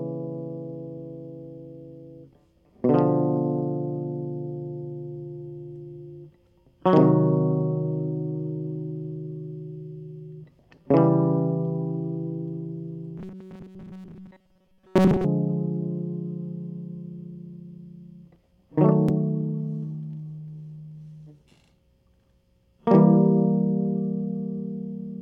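From 13.2 to 15.3 s the music becomes robotic sound from repeated short buffers, a rigid metallic buzz fixed at 188 Hz. It is likely caused by a 5.3 ms slice looping over most of the stretch. Unlike dropouts, nothing falls silent, and the steady pitch betrays it.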